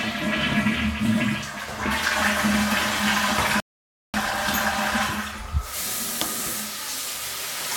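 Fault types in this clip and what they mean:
Rebuffering stall: the player's download buffer ran dry, so playback halted until more data arrived. At 3.60 s the audio drops to silence for 0.54 s, then resumes exactly where it stopped at 4.14 s, so nothing is skipped but the clip runs longer.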